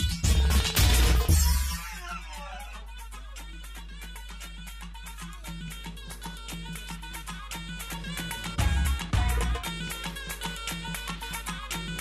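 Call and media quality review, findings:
Mains hum, full length of clip. Probable ground loop or transformer coupling power-line current into the signal path. Steady 50 Hz tone with low harmonics under all the audio, strong at roughly 15 dB below the wanted signal. Constant and never gated, so it colours the low end throughout.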